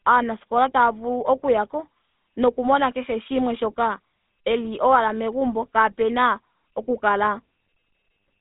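Throughout this speech recording the sound has a buzzy, gravelly roughness and a thin, telephone-like band of roughly 200 Hz to 3.6 kHz, with nothing above 3.8 kHz. This is the GSM full-rate codec, which fits 13 kbps. It rebuilds the voice from a vocal-tract model excited by a coarse, regularly spaced pulse train, which produces that grit.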